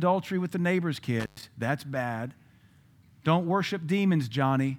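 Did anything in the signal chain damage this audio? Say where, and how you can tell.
Yes, an intermittent contact in the analogue wiring. Just after "with the neighbor's", between 1.20 and 1.43 s, the speech cuts out for about 0.11 s with crackle at each edge as a loose plug or cable opens. Faint hiss continues through the gap rather than clean digital silence, which rules out a network or buffer dropout.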